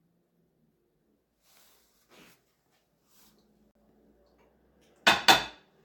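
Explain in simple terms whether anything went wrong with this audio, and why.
A gap between stream segments occurred: the timing of two consecutive pieces of the stream did not line up, so the player filled the space with silence. At 3.71 seconds the sound cuts out abruptly for about 42 milliseconds, then resumes where it left off, with nothing lost.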